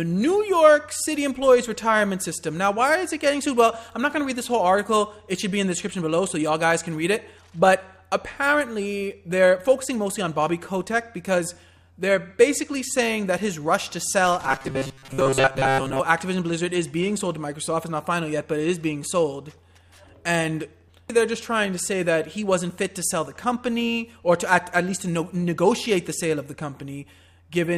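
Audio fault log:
14.47–16.0 s, robotic sound from repeated short buffers: rigid metallic buzz at 134 Hz, likely a 7.5 ms chunk looped while most fresh audio got skipped.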